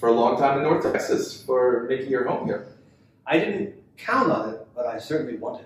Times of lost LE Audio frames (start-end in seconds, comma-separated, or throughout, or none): 0.85-0.94